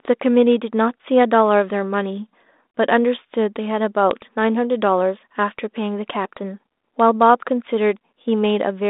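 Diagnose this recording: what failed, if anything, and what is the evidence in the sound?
Nothing stood out on listening to this recording; the speech comes across as an ordinary narrowband telephone-band signal consistent with a 32 kbit/s G.726 link working as intended.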